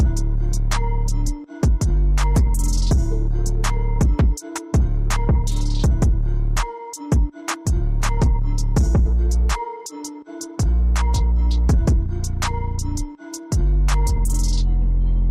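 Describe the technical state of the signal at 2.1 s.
At 2.1 s the signal is intact, with no dropout, distortion or other fault audible at that moment.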